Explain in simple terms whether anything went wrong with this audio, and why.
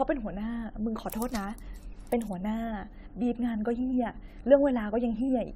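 The speech sounds swirly, hollow and smeared from start to finish. This is generation loss, likely from compressing and re-saving it about seven times.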